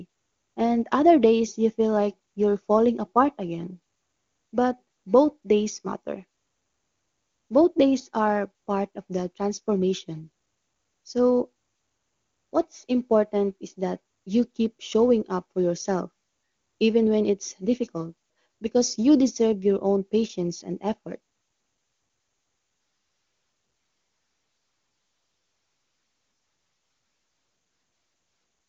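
The speech arrives over the AMR wideband (HD Voice) codec at its top rate of 23.85 kbit/s, so the band stops at about 7.1 kHz with only faint traces of coding, and nothing has gone wrong with the signal.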